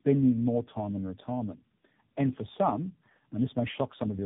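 Tandem speech coding runs through the whole clip: the speech sounds like it passed through several codecs in a row, most likely a chain like CVSD, G.726 and AMR-NB at about 8 kbit/s, each re-encoding the previous one's damage. It comes out rough, muffled and warbly, with nothing above 3.8 kHz.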